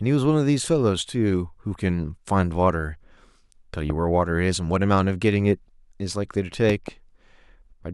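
A speech recording with two loud pops. One sharp pop lands at 3.90 to 3.92 s. A double pop follows from 6.70 to 6.90 s. Each peaks roughly 10 dB above the speech, which carries on underneath. A voltage spike from a plug, switch or static is the likely cause.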